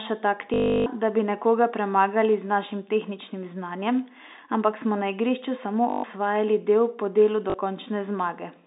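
Packet loss with the last packet repeated: lost 20 ms packets were concealed by replaying the previous one, giving a 50 Hz robotic buzz at 0.54–0.86 s before "da bi nekoga premagali", 5.9–6.04 s before "osvajali del po delu", and briefly at 7.5 s after it, all over narrow G.711 telephone-band sound.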